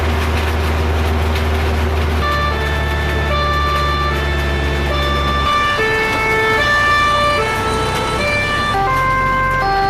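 Nothing in the recording stood out as a technical problem on listening.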